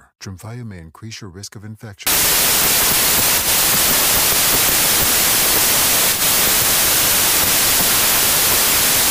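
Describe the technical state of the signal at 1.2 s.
At 1.2 s the speech signal is intact, with no dropout, click, distortion or other fault at that point.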